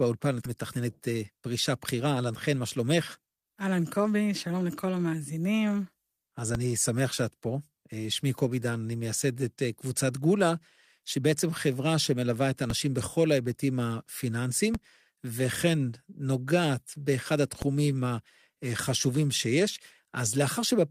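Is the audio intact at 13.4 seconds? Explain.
Yes, the audio is intact at 13.4 seconds, with no audible fault at that point.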